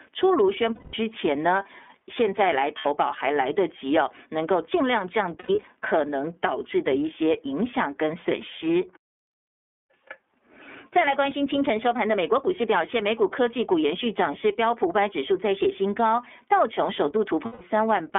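Throughout, the speech sounds thin, slightly rough and synthetic, confined to roughly 250 Hz to 3.5 kHz with nothing above. This is plainly audible iLBC codec damage: a narrowband VoIP coder rebuilding each 30 ms frame's excitation independently, with coarse detail lost.

At 0.75–0.94 s (180 ms), 2.78–2.86 s (60 ms), 5.39–5.65 s (150 ms scattered, longest run about a tenth of a second) and 17.45–17.61 s (150 ms), the sound freezes into a held, buzzy vowel. These are lost iLBC frames, concealed by repeating the last pitch cycle with noise. Each recovers immediately.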